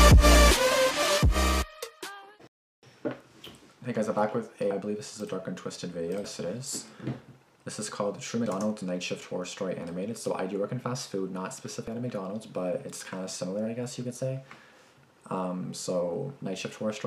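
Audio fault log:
1.02, 4.71, 6.24, 8.46 and 11.88 s: dropped buffer (overrun). Each point has an abrupt forward jump in the sound and no gap of silence. Roughly a tenth of a second goes missing at the first four, and somewhat more at 11.88 s. The likely cause is that the capture side failed to read its buffer before the hardware wrote over it, so that stretch of samples was lost and the audio on either side was joined directly.
2.47 to 2.83 s: rebuffering stall. The sound cuts to silence for 355 ms and then picks up at exactly the point where it stopped, with nothing skipped. The playback ran dry of downloaded audio and waited for more data to arrive. Because no samples are lost, the stall adds 355 ms to the running time instead of removing material, which sets it apart from the skips elsewhere in the clip.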